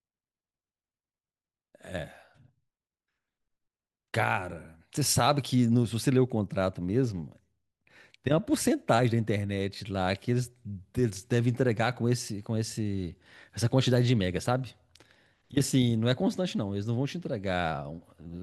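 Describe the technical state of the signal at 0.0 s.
At 0.0 s the speech signal is intact, with no audible fault at that moment.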